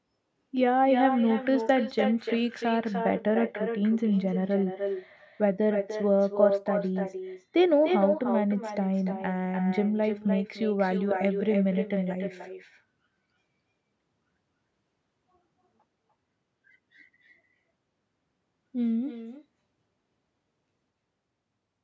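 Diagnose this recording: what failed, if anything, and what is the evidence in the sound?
Echo with no canceller, in call processing at the far end. Every phrase returns around 300 ms later, about 6 dB quieter and thinner, throughout.

De-emphasis applied wrongly, at the sample-format or codec stage. From 2.7 to 10.4 s the treble slopes away, about 14 dB down at 10 kHz. Speech turns dull and muffled.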